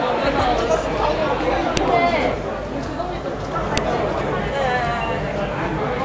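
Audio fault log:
1.77 s and 3.77 s: file header played as audio. Each event is a single sharp, loud click lasting only a few milliseconds, cutting across the sounds regardless of what they are doing. The two clicks fall 2.0 s apart, which points to joined or streamed pieces of that length whose leading header bytes were never removed. Those bytes are treated as sample values, producing an abrupt jump unrelated to the surrounding waveform.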